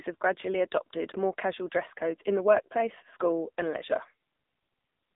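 From start to finish it's AMR narrowband mobile codec damage: nothing above 3.8 kHz, thin telephone band, and buzzy, synthetic speech that suggests a low mode near 7.95 kbps.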